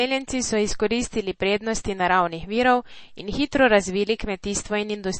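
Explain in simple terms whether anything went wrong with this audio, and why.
Something did go wrong, and it affects the whole clip, from start to finish. The speech has a plainly audible watery, swirling quality, and everything above about 8.4 kHz is simply missing, so s sounds lose their crispness and the sound seems dull and smeared. The likely cause is heavy MP3 compression. Short of data, the encoder discarded the top of the frequency range and let quieter details flicker in and out, which produces the swirl.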